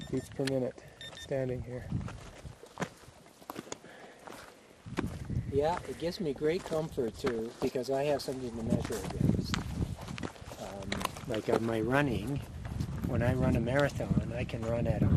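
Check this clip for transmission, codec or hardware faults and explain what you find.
Two problems: coding damage all the way through, and bursts of reception errors on top.

MP2 compression runs throughout. The sound is dull and grainy with a gurgling edge, likely from MPEG Layer II at a low rate, something like 80 kbps, where upper sub-bands get switched off and the remaining bands are coarsely quantised.

DAB burbling hits at 0.71–1.16 s, 5.12–5.28 s, 6.89–7.71 s, 8.62–8.88 s, 10.92–11.21 s and 14.32–14.41 s. Bit errors slipping past error correction corrupt scale factors and samples, so single bands jump in level, giving short blips of noise. The 6.89 s burst is the longest and roughest.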